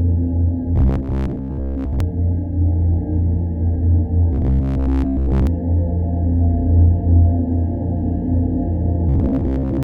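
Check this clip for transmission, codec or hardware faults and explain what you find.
There is one kind of fault, robotic sound from repeated short buffers, in three stretches: 0.76 to 2.00 s, 4.33 to 5.47 s and 9.09 to 9.83 s. Each turns the audio into a rigid, metallic buzz near 66.7 Hz that only loosely tracks the original. The likely cause is input arriving too seldom, so the last 15 ms fragment is replayed to fill the gap. Around 70 percent of the material is repeated while the real sound is skipped.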